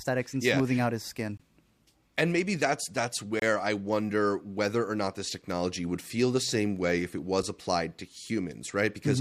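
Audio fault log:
1.37–1.40 s, 3.40–3.42 s, 7.43 s: gap between stream segments, where mistimed 2-second segment joins leave silent holes of about 22, 24 and 7 ms, inserted with no audio lost; each appears as a hard-edged flat line in the waveform and a clean vertical blank stripe on the spectrogram.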